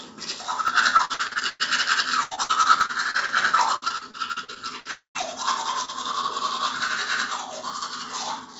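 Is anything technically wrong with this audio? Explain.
Yes. The sound is broken up repeatedly by network loss and by small skips where audio was dropped outright.

Dropped buffers (overruns) occur at 0.68, 2.81, 4.3, 6.88 and 7.7 s. At each point a short block, about 10 ms, or about 20 ms at 6.88 s, is missing and the two sides are butted together with no gap. Each is heard as a small jump in the sound. The likely cause is the capture side failing to read its buffer before the hardware overwrote it.

Repeated packet loss (robotic sound) covers three stretches: 0.97 to 1.61 s, 2.23 to 3.30 s and 3.76 to 4.87 s. Each stretch has seven or eight gaps, the longest 103 ms, 75 ms and 58 ms respectively. Each hole is patched by extending the preceding sound, and the next loss arrives before things settle. The first stretch is the worst, with nearly half its length synthesized, and it sounds choppy.

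A long network dropout runs from 4.91 to 5.17 s, with about 240 ms of audio never arriving. The receiver first stretches the last sound into a fading buzz, then roughly the final 120 ms goes silent before the sound resumes further on, skipping what was lost. A sustained interruption in delivery is the likely cause.

A short concealed packet loss at 5.85 to 5.90 s replaced about 20 ms of missing audio with extrapolated sound before blending back into the real signal. It comes across as a brief smear or wobble.

The call path is G.722 at 64 kbps, so there is no content above 8 kHz.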